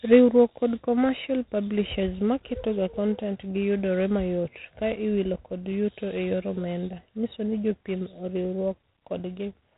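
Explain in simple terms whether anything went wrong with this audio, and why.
Throughout, G.726 ADPCM coding stores each sample as a coarse correction to a prediction, leaving a rasping hiss that follows the speech's loudness; nothing above 3.9 kHz survives.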